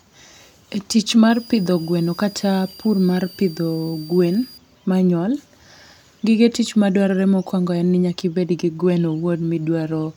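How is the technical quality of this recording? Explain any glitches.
The speech is marred by one glitch. From 1.29 to 4.58 s a switching supply whistle sits about 25 dB below the voice, a faint tone wandering between 4.63 and 4.98 kHz. It comes from a power supply switching in an audible burst mode or beating with another supply, and the drifting pitch sets it apart from fixed-frequency mains hum.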